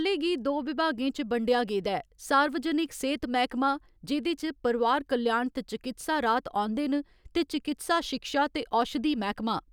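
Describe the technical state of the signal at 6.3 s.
At 6.3 s the speech signal is intact, with no dropout, clipping, glitch or other audible fault.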